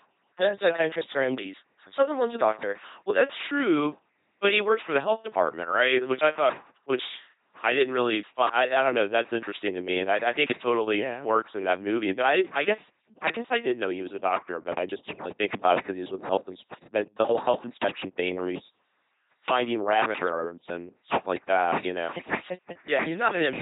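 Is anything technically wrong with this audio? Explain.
Yes. An LPC-10 vocoder runs through the whole speech clip. Each moment is resynthesised as purely voiced or unvoiced, with a pulse buzz or noise driving a filter of up to ten poles. The result is heavily damaged, mechanical, buzzy speech with misplaced hiss, consistent with 2.4 kbit/s coding, and nothing above 3.9 kHz.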